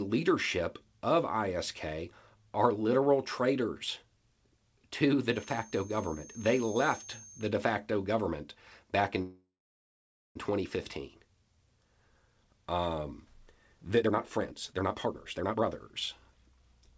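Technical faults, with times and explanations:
5.28–7.53 s, feedback whistle: A loudspeaker-to-microphone loop likely sat at the edge of feedback, leaving a thin 6.4 kHz whistle at one pitch, slowly swelling and fading, roughly 20 dB below the speech.
9.22–10.37 s, call audio freeze: Delayed packets likely emptied the jitter buffer, so the last sound was stretched into a fading buzz or hiss, then about 0.9 s of silence. The speech resumes where it stopped, with nothing lost.
14.01–15.66 s, jitter buffer speed-up: With too much audio queued, the receiver cut many short pitch-period pieces, about a second in total. The speech plays at 151% speed, hurried but at unchanged pitch.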